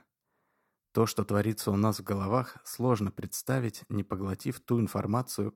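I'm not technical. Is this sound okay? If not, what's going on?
Yes, the recording is technically sound, with nothing going wrong in the signal at any point.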